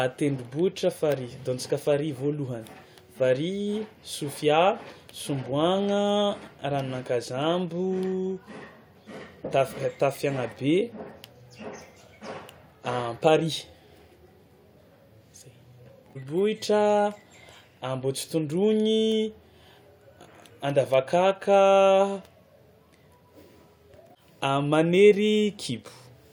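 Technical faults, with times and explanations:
No technical faults are present, so there are no times or explanations to give.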